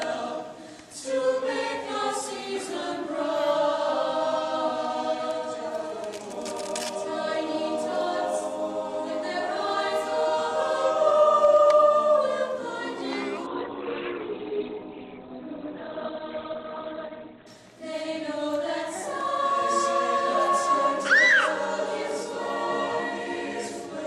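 From 13.47 to 17.47 s the adaptive stream drops to a lower bitrate: the connection slowed, so the player switched to a leaner version. Without any gap, everything above 4.3 kHz vanishes and codec artefacts jump, which fits a fall from around 64 to 12 kbit/s Opus.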